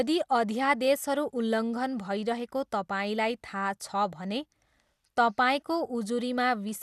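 The encoder has likely starved the sub-bands of bits for the whole length of the speech, which fits MP2 compression at a low rate around 80 kbps. With too few bits to share, the Layer II coder shuts off its upper bands, so nothing survives above about 12.2 kHz, and the bands that remain are coarsely quantised and flicker in and out. The result is a dull top end with a plainly audible gurgling, granular roughness running through the voice.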